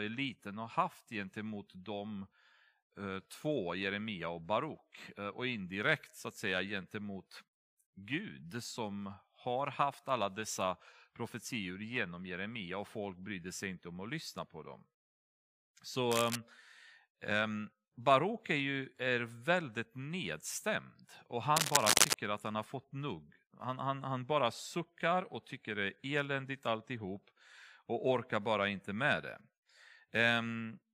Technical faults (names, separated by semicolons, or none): cable scratch noise